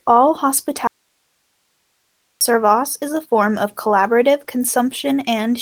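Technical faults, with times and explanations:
0.87–2.41 s, audio dropout to a faint residue: the speech cuts out abruptly for about 1.5 s, leaving only hiss roughly 50 dB down, likely a break upstream while the input stayed live. The waveform shows a sharp-edged near-flat block; the spectrogram shows faint, even noise.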